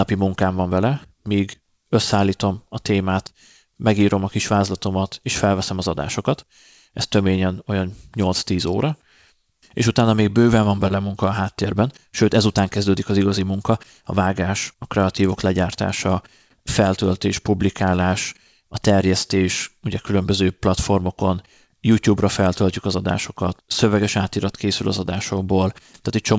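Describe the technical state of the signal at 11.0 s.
At 11.0 s there is a short stall from a late packet, spanning 10.88 to 11.06 s, between "utána még bőven van" and "a háttérben sőt ezután". The receiver stretched the preceding sound by about 21 ms while waiting, so nothing is lost, but one sound is held slightly long with a slight buzz or dip.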